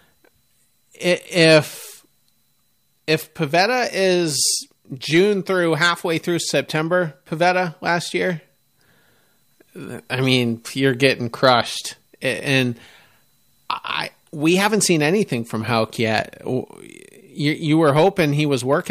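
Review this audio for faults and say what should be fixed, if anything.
Nothing stood out on listening to this recording, so there is nothing here that needs fixing.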